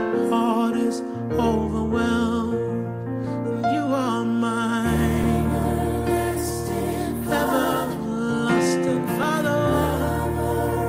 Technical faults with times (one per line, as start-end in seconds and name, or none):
3.24 overlap between stream segments
5.24 overlap between stream segments
9.23 overlap between stream segments